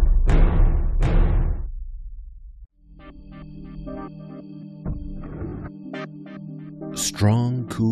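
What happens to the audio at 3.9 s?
Nothing goes wrong at 3.9 s: the audio passes through that moment intact, with no dropout, click or other fault to be heard.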